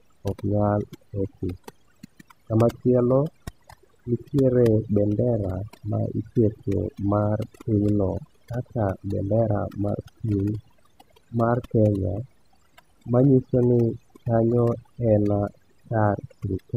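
From start to finish, the speech carries overdone noise removal. A noise reduction stage was pushed too hard on a noisy source. It drives individual frequency bands far down or off whenever they sit near its noise estimate. The quieter parts of the voice are caught and removed with them. The background between phrases drops away and breaks up into twinkling, warbling specks.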